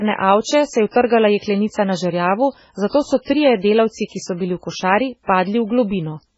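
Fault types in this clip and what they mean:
MP3 compression: The speech sounds watery and swirly throughout, with heavy damage and nothing above 7.7 kHz. Weak frequency detail flickers on and off between frames. This likely comes from MP3 encoding, at a level that fits a very low bitrate near 16 kbps.
Pre-echo: A short hiss runs ahead of sharp attacks at 1.06, 1.38, 2.89 and 3.22 s, each lasting 38 to 53 ms. The codec spreads its noise across a whole block. So the quiet moment before a late onset fills up, and those attacks sound smeared.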